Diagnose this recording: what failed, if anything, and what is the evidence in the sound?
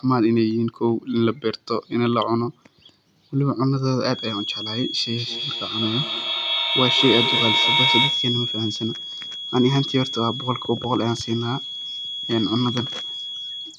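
From 4.05 s onward, a thin 3.3 kHz feedback whistle, slowly swelling and fading, sits well under the speech, likely a speaker-to-mic loop parked right at the edge.

From 5.18 to 8.37 s there's feedback echo between two devices: speech returns about every 200 ms at full level and stacks up, beyond either echo canceller's reach.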